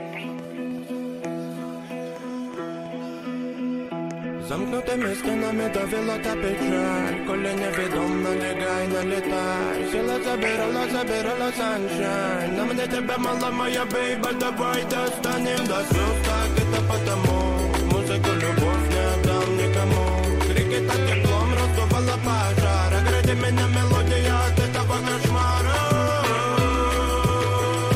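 All the way through there's sample clock jitter, about a microsecond and a half of timing wobble, leaving a hiss roughly 40 dB down that swells on loud, bright passages.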